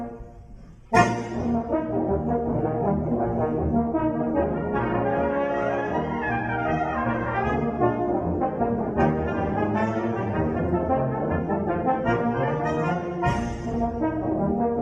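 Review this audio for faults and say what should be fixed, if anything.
Nothing stood out on listening, so there is nothing here that needs fixing.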